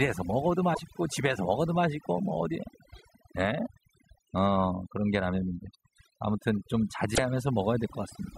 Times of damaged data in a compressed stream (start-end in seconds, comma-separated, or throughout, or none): 0.71-0.80, 7.12-7.19